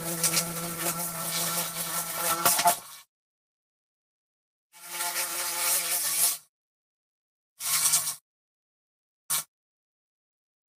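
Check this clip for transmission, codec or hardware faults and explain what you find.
There's one fault, near the end: a jitter buffer speed-up running from about 8.20 s to 10.73 s. The receiver had built up more audio than it wanted, probably after a bunch of delayed packets landed together, so it trimmed that backlog by repeatedly cutting out tiny pitch-period-sized slices. Over those two and a half seconds it drops around a tenth of a second in total, so the sound plays about 3% fast with its pitch unchanged.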